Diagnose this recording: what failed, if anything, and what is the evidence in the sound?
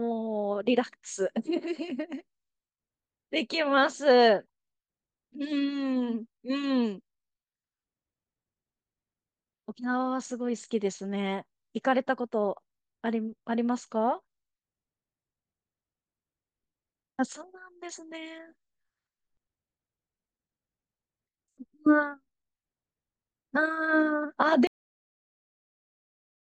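The speech stops abruptly at 24.67 s, mid-sound, dropping straight to digital silence with no decay: a cut-off end, where the final buffers were never written to storage.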